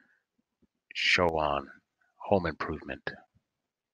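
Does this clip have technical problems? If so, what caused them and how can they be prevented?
Yes: from 1.29 to 1.34 s the speech dips abruptly by about 6 dB, likely one channel dropping out before the mono sum. Check stereo cabling and connectors so both channels stay solid.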